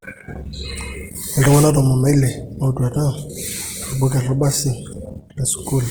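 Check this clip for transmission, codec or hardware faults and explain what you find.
One codec fault runs through the whole speech clip. Opus compression, likely in its CELT music mode at a low bitrate near 16 kbps, fills starved bands with noise, making sound grainy and rough rather than MP3-style swirly.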